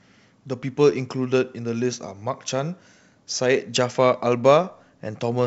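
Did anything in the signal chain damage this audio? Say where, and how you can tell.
No, nothing damaged this audio.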